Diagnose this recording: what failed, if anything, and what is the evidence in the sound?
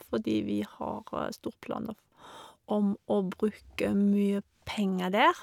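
Nothing failed here: I listened for trouble anywhere in the chain, from the wiring through to playback, and the speech comes across without any fault I could point to.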